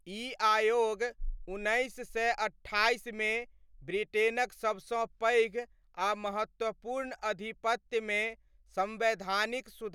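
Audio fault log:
Throughout, the signal holds steady, with no technical fault audible anywhere in it.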